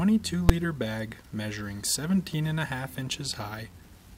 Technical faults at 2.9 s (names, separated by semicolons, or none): none